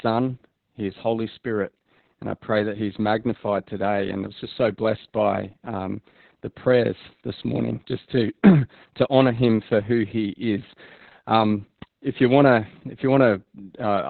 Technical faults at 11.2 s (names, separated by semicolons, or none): Opus voice compression